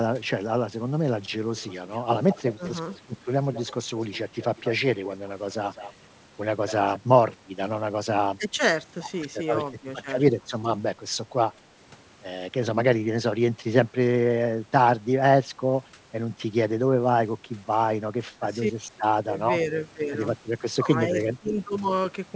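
From 1.57 to 6.99 s there is an echo leak. A faint, delayed copy of the speech trails the direct sound by about 0.2 s, sitting roughly 15 dB below it. This is likely a far-end loudspeaker whose echo canceller let part of the pickup through and sent it back. On a spectrogram, each syllable's harmonic pattern reappears shifted right by about 197 ms and fainter. In the waveform, low ghost bursts fill the gaps after each phrase.

Speech suppressed in double talk happens in five places: briefly at 2.55 s, across 7.32 to 11.62 s, briefly at 15.92 s, across 18.41 to 19.33 s, and briefly at 21.42 s. The echo canceller likely could not tell the local talker from the loudspeaker echo while both sides spoke, so it pulled the level down. The dips are deepest, around 15 dB, at 2.55 s and in the 7.32 to 11.62 s stretch. They reach about 10 dB near 18.4 to 19.3 s and only about 5 dB at 15.92 and 21.42 s. 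Each short event lasts roughly 70 ms. The longer stretches hold scattered drops totalling about half a second and about 150 ms. The waveform shows sudden notches in the envelope. The spectrogram shows brief vertical fades where energy thins across the band, which is already capped at 8 kHz by the wideband call path.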